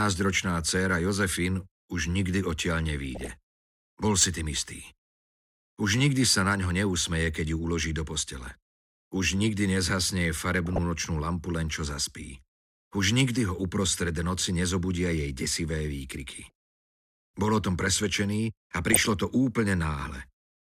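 Short bursts of DAB burbling appear at 3.03 to 3.32 s, 6.45 to 6.66 s, 8.38 to 8.55 s, 10.66 to 10.83 s, 16.43 to 16.51 s and 18.93 to 19.14 s. Bit errors, at a rate of a few tenths of a percent, slip past error correction into the MP2 stream. Corrupted samples put short blips of noise into single sub-bands, and corrupted scale factors make sub-bands jump in level for up to a frame. The result is short blips of noise over the sound, each burst spanning roughly five to thirteen frames.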